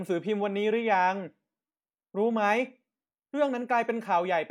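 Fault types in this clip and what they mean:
Nothing to flag here; there's no technical fault to be heard anywhere in this short bit of speech.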